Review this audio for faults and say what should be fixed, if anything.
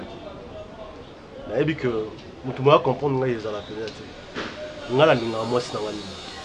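Nothing needs fixing: the signal holds steady throughout, with no dropouts, distortion or other technical faults to address.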